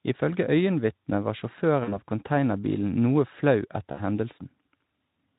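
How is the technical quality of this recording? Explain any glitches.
Two short dropouts mar the speech, over a lightly coded Speex layer that adds only mild hoarseness. VoIP packet loss concealed by the speech codec hits at 1.83 to 1.98 s, just before "av containerbilen noe flau", and at 3.91 to 4.00 s, right after it. About 40 ms and 60 ms of audio went missing. The decoder stretched its last pitch and filter into a fading buzzy or noisy sound, and the voice stays weak briefly.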